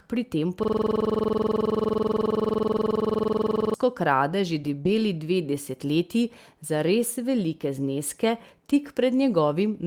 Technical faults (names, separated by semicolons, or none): system hang loop; lost packet rebuilt from error correction; short concealed packet loss